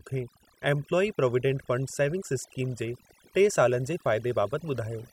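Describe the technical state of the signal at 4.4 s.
At 4.4 s the speech carries overdone noise removal, present throughout the clip rather than at this moment alone. The noise reducer is pulling individual frequency bands down hard wherever their level sits close to its noise estimate, so soft parts of the speech are cut along with the noise. The background collapses to near silence sprinkled with twinkling specks. A noise gate would instead mute everything at once, with no per-band sparkle.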